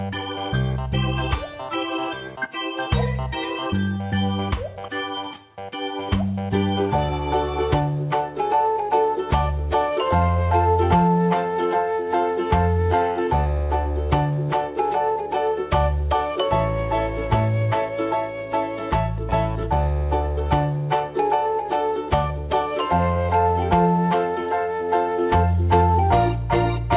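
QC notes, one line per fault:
No faults found; the audio has come through a G.711 A-law call path at 64 kbps, and nothing above 4 kHz is heard.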